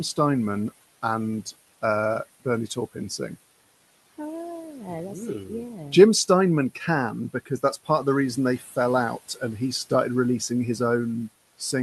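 A noise suppressor is working on the speech from start to finish, cutting what it judges to be steady background noise by about 17 dB, band by band in short frames. This causes noise suppressor artifacts: the room noise, which sits about 19 dB under the voice, drops away in the gaps and swells back up beneath each phrase.

From 8.59 to 8.77 s, the suppressor mistakes part of the speech for noise and turns it down with the background, dipping it by as much as about 11 dB over roughly a fifth of a second. This speech cut by the noise suppressor makes that stretch sound swallowed and faint, as if the sounds there were pulled back from the microphone before the level recovers. The call codec's response stops at 12 kHz, and its usual coding grain fits Opus at around 40 kbps.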